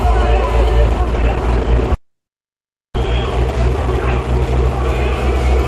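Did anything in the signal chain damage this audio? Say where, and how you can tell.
Yes. From 0.83 s to 4.83 s the treble abruptly collapses, with nothing above 12.1 kHz and more codec smearing, then snaps back with no gap. That's an adaptive stream at a lower bitrate on the network side, consistent with Opus dropping from roughly 64 to 16 kbit/s.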